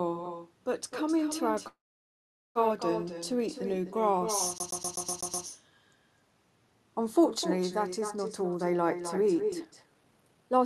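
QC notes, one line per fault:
Throughout: echo with no canceller. Every phrase gets trailed by a fainter, thinner copy, about 8 dB down and around a third of a second behind. The far end had the call playing on a loudspeaker, their mic picked it up, and nothing cancelled it, so your own audio comes back after the network round trip. The copy also carries the Opus coding of the call path, with its top end stopping near 12 kHz.
1.67–2.58 s: call audio freeze. The sound holds on as a short fading buzz, then drops to silence for roughly 0.79 s before picking up right where it left off. About 0.88 s of gap gets inserted with nothing lost, so everything after this point runs that much later. That's likely packets stalling in transit and the jitter buffer running dry, with the receiver stretching the last bit of sound until data showed up.
4.58–5.46 s: CD stuck on one turn. A tiny slice of about 125 ms plays seven times in a row, with a brief mute at each jump, giving that quick, perfectly regular stutter. 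It's the classic scratched disc, where the laser gets knocked back one track at the same spot on every revolution. Because the loop length stays fixed, the stutter sounds mechanical rather than like a network hiccup.
9.20–10.65 s: jitter buffer speed-up. The last stretch runs at about 130% speed with no change in pitch, so it comes across as rushed. The receiver had built up more buffered audio than it wanted, probably after a burst of late packets, and trimmed it back by cutting out short pitch-period-sized chunks over and over. Tempo goes up while the pitch stays put, and that mismatch is what gives it the hurried feel.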